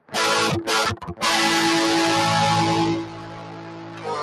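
A speech-tuned noise suppressor applied to music or sounds runs through the whole clip, riding the level up and down by around 15 dB. It treats sustained tones and decays as noise, so the sound pumps and thins. Unlike a compressor's pumping, which follows loud peaks, this one tracks steadiness: onsets pass while held material sinks. Sound cut by the noise suppressor is clearest from 0 to 0.16 s (about 15 dB down), from 0.95 to 1.23 s (about 14 dB) and from 2.96 s to the end (about 15 dB). Sustains and tails drop away there, but sharp attacks come through, which separates this from a dropout that silences everything alike.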